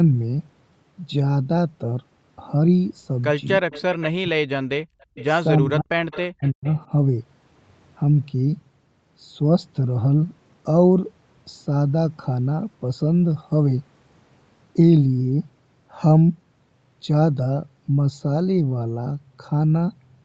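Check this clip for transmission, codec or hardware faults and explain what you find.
Three echo-canceller faults show up in the first seven seconds, all clustered around a stretch where both ends of the call seem to be active at once.

Speech suppressed in double talk, at 3.58 to 3.66 s, 4.21 to 4.59 s and 5.61 to 6.67 s: the canceller likely mistook the near talker for loudspeaker echo and attenuated everything. The speech drops by as much as about 40 dB, briefly at first and then for roughly a second.

Echo leak, at 3.71 to 4.07 s, 4.82 to 5.24 s, 6.11 to 6.21 s and 6.43 to 6.75 s: residual loudspeaker pickup likely slipped past the canceller and was sent back. A faint copy of the speech returns about 330 ms late, sitting roughly 20 to 30 dB below the direct sound.

Background gated by the echo canceller, at 4.87 to 5.10 s: while the loudspeaker was active, the canceller clamped the microphone hard. 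The room tone dips by about 40 dB for around 200 ms before it comes back, which is audible as a brief hole in the noise floor.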